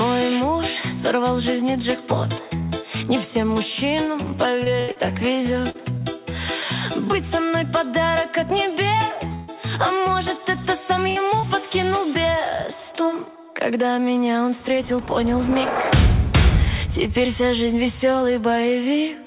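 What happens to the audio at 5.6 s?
Repeated packet loss (robotic sound) runs from 4.64 to 6.02 s, and 5.6 s falls inside it. Audio packets went missing five times across this stretch, with the longest hole about 79 ms, and each gap was patched by stretching out the preceding sound. About 16 % of the span is concealed this way. The result is choppy audio with small pieces missing, heard within the call's narrowband sound, which has nothing above 4 kHz.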